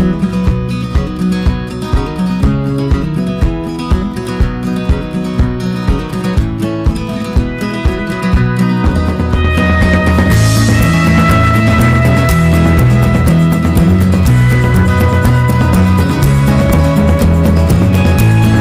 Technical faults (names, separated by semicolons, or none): hard clipping